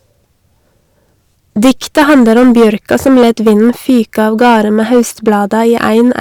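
Hard clipping runs through the whole speech clip. The signal reaches the stage about 10 dB hotter than it can pass. So every peak is sliced off flat. Roughly one sample in fourteen sits at the ceiling. Those flat tops create harmonics high in the spectrum that the original never had. The result is a harsh, buzzing fuzz on each loud syllable. Quieter stretches between peaks sound cleaner.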